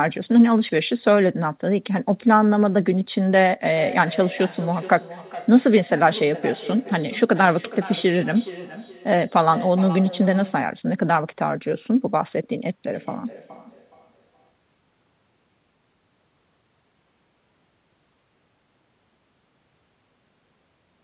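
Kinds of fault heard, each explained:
Feedback echo between two devices: a second device in the room replays the call, and the first mic picks it up again, beyond its own echo canceller's reach. Sound comes back roughly every 0.4 s, peaking about 16 dB below the speech, then later fainter, about 25 dB down.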